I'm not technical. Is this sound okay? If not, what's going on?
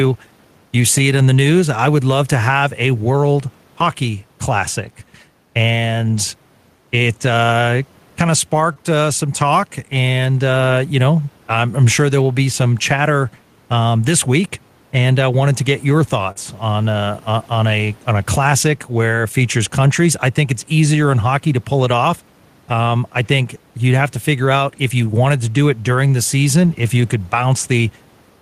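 No, not quite. There are three separate problems.

Throughout the clip there's gain pumping. Loud and soft parts end up closer in level, and the sound comes across as squashed. The likely cause is a microphone level set too high, with an automatic limiter pulling it back down on every loud moment.

At 8.73 to 8.78 s and again at 16.32 to 16.37 s you'll hear short concealed packet loss. A few hundredths of a second of the call didn't arrive in time, so the receiver stretched out the last sound to fill the hole. It comes across as a quick smear or wobble.

At 26.63 s there's a lost packet rebuilt from error correction. One tiny chunk of about 20 milliseconds went missing, and the system replayed a rougher backup copy of it. You won't hear a gap, just a brief grainy, rougher moment.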